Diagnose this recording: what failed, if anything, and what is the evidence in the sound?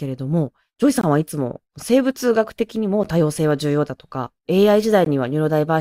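The failure is at the playback stage, where stream segments are joined: a gap between stream segments. Hard-edged silent holes cut the speech at 1.01 to 1.04 s (about 21 ms), at 3.04 s (10 ms) and at 5.05 s (17 ms), spaced about 2 s apart, which matches 2-second segments whose timestamps leave a small gap that the player pads with silence. Unlike packet loss or a dropout, the sound resumes exactly where it stopped, so nothing is missing and the timeline is simply stretched.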